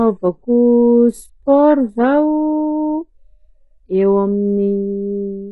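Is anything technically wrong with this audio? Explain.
Yes. Throughout the speech, heavy damage points to HE-AAC compression at a very low bitrate, likely around 12 kbps: the treble is rebuilt from copied lower bands, so sibilants sound gritty and metallic, and a spectrogram shows smeared, repeated high-band patches ending sharply at 11.5 kHz.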